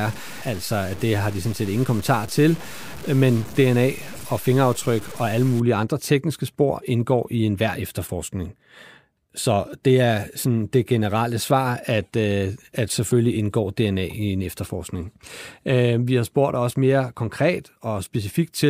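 From 0.00 to 5.60 s, the speech likely passed through a low bit depth without dither stage, with samples truncated to very few levels. The grit points to something around 6 bits. Because the rounding error tracks the waveform rather than being randomised, it becomes distortion tied to the voice: quiet parts turn grainy and sputtery, with the error roughly 20 dB below the signal. It clears just before "andre tekniske spor indgår".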